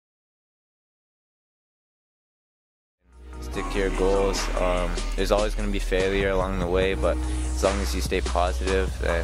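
No technical faults are present: the level rises in a smooth fade-in from around 3 s to full level at 4.03 s, with no click or hard edge, and the signal then holds steady without dropouts, distortion or other defects.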